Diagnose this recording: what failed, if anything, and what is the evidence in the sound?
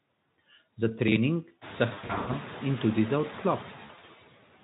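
In the call-processing stage, noise suppressor artifacts run through the whole recording. Between phrases the background drops by about 14 dB, then swells back under the speech, and that pumping grows more obvious once the room noise rises, at roughly 1.5 s, to about 16 dB below the speech. The suppressor cuts bands it judges to be steady noise, frame by frame. On a spectrogram the noise floor appears as blotchy, flickering patches, dark in pauses and refilled beneath voiced energy.

VoIP packet loss concealed by the speech codec is a network fault. It sounds twice: from 1.93 to 2.38 s, just before "in tudi za", and from 3.85 to 4.11 s. About 280 ms of audio goes missing over the first 400 ms span and 140 ms over the second 240 ms, in gaps of up to 80 and 40 ms that fit 20 ms frames. The Speex decoder fills each gap by repeating its last pitch and filter at falling gain, producing fading smears. 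A spectrogram shows flat harmonic stripes and blurred formants where the speech should move.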